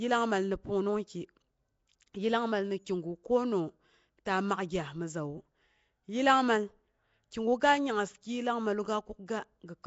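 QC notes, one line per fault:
Throughout, Nellymoser compression: the speech has been squeezed through a coarse transform codec, likely Nellymoser Asao at a rate around 32 kbps, which spends a fixed, small number of bits on each block and hands weaker frequency bands no bits at all, refilling them with noise. The damage is plainly audible as a rough, hissy fringe around the speech and a smeared, underwater colour. Nothing survives above 7.7 kHz, so the top end sounds dull and boxed in.
4.25 s, pre-echo: a sharp attack lands late inside one coding block, and the quantisation noise that the codec sized for the loud onset is spread across the whole block, including the quiet stretch just before it. About 10 ms of hiss leaks in ahead of the attack, so the onset arrives blurred and softened rather than crisp.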